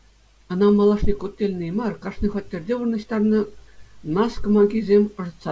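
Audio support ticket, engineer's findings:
No faults found in this speech clip. Call path working as expected: content stops at 8 kHz, consistent with a wideband call codec like G.722, with only the codec's normal coding noise.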